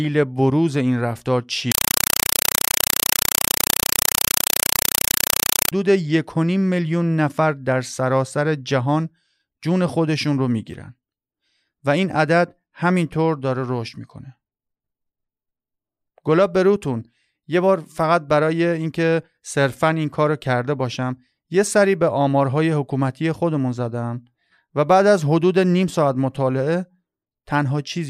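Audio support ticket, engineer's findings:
Loud chattering static replaces speech, 1.72–5.72 s. Compressed stream played as audio: undecoded bitstream on digital link taken as PCM. 4 ms noise bursts repeating at 31.25 Hz fit AC-3 frames.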